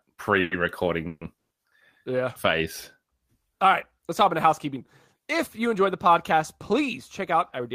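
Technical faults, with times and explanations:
0.41–0.53 s, 1.07–1.23 s, 1.37–1.52 s: call audio freeze. The sound stalls, likely from packets held up in transit. The first gap is a fading buzz, the second ends silent, and the third is fully silent. Speech resumes where it stopped, adding 100–140 ms of delay each time. These appear as smeared bands or flat gaps.
7.19–7.74 s: jitter buffer speed-up. About 40 ms of pitch periods are trimmed, so the sound runs 5 percent faster at unchanged pitch. The waveform shows whole periods dropped, with harmonics unshifted.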